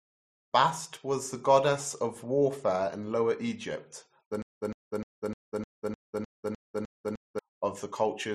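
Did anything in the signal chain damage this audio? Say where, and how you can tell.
Yes. From 4.42 s to 7.39 s the speech turns into a stutter with silent gaps: one 150 ms fragment repeats 10 times, each followed by 154 ms of silence, a 304 ms cycle. The likely cause is a playback stall that replays the last fragment at each retry, losing the audio in between.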